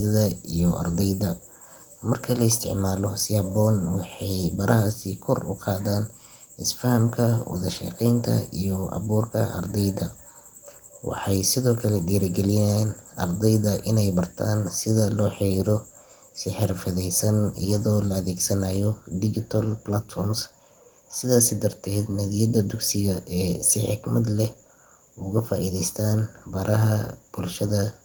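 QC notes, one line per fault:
No faults are heard anywhere in the clip. The Opus voice compression keeps the full band, with content reaching about 20.2 kHz, and leaves only light coding damage, which fits a rate around 24 kbps.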